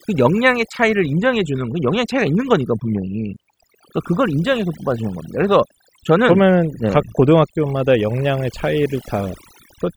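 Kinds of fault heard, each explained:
Overdone noise removal: an over-strong noise reducer drops single frequency bands whenever they sit near its noise estimate, so throughout, the background drops and breaks up into twinkling specks. Unlike a gate's all-or-nothing muting, it works band by band.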